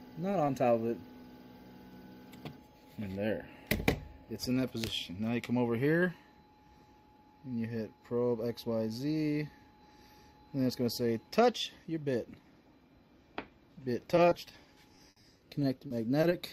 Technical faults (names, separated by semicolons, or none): short concealed packet loss; repeated packet loss (robotic sound)